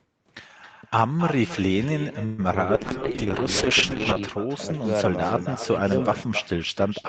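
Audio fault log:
Throughout: echo with no canceller. Every phrase gets a thinner shadow about 12 dB down and roughly 300 ms behind. The far end's loudspeaker is feeding its mic, nothing strips that out, and your own speech returns after the network round trip.
2.25 to 2.40 s: call audio freeze. For about 128 ms the last sound is stretched into a fading buzz rather than dropping to silence. Then the speech resumes exactly where it left off, with nothing lost, just shifted later. Likely packets stalled in transit and the jitter buffer ran dry.
2.52 to 2.55 s: short concealed packet loss. A quick smear where about 20 ms of audio never made it to the decoder. The receiver extrapolated from the preceding sound to plug the hole and crossfaded back into the real signal, so it reads as a tiny wobble.
2.76 to 4.27 s: call bitrate drop. The Opus encoder falls from 32 to 9 kbps and sits at the bottom for about 1.4 s. 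Coarser coding at that rate makes things rough and watery, worse than the 8 kHz band-limited sound on either side of the drop.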